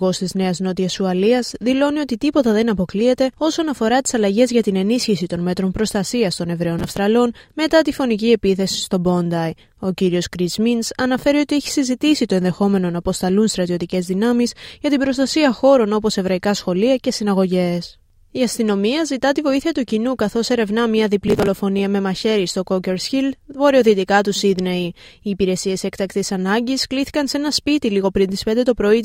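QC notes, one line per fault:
6.79–6.98 s and 21.28–21.47 s, processor overload crackle: a run of audio buffers, each only a few milliseconds long, misses its deadline and is skipped. Each skip leaves a hard-edged gap, and the closely spaced gaps merge into a burst of gritty crackle lasting about 0.2 s.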